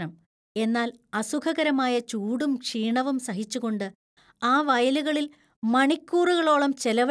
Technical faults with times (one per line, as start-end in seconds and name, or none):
none